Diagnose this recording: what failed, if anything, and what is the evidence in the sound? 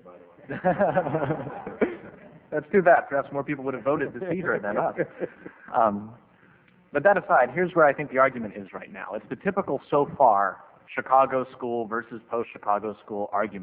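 No fault found in this recording.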